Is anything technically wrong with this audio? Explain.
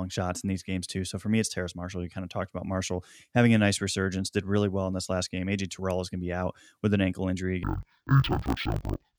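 Yes. From 7.63 s to the end at 9.19 s, the speech drops an octave and sounds doubled and choppy. This is interleaved audio read as planar. Each 21.77 ms block of alternating left-right samples is split so its first half feeds the left channel and its second half the right. Each half plays stretched across the whole block at half speed, lowering pitch 12 semitones, while the block-by-block restart, 45.9 times a second, makes it choppy.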